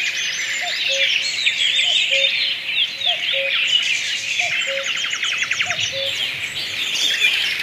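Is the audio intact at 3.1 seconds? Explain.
Yes, the audio at 3.1 seconds plays through cleanly, with no dropout, click, distortion or other technical fault at that moment.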